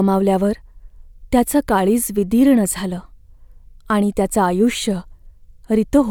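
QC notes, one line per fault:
Nothing stood out on listening to the speech in this clip.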